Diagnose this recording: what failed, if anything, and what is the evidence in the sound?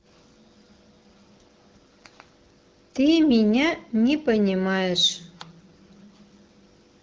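Nothing has failed here; this is speech carried over an AMR wideband (HD Voice) link at 12.65 kbit/s, a rate where that codec normally holds up well, and no stage of the chain gives any sign of trouble.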